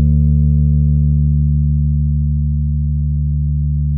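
Nothing goes wrong anywhere in this bit of sound; there's simply no technical fault to point to.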